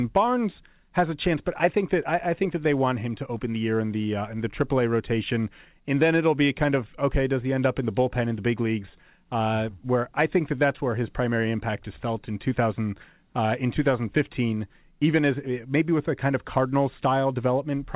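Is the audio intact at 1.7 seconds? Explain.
Yes, at 1.7 seconds the speech is intact, with no fault at that moment, only the narrow, telephone-like band of a call path that carries nothing above 4 kHz.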